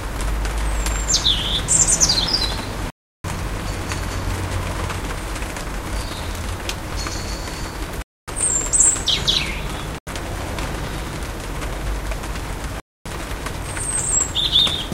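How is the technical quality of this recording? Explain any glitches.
The quality is marred by four dropouts. Each is a block of digital silence: the audio cuts straight to silence and back with no fade. It falls at 2.90 to 3.24 s (about 341 ms, which fits a 16384-sample block), 8.02 to 8.28 s (256 ms), 9.98 to 10.07 s (about 85 ms, which fits a 4096-sample block), and 12.80 to 13.06 s (256 ms). Zeroed blocks like these point to an output buffer left unfilled in time. Each one is a short hole.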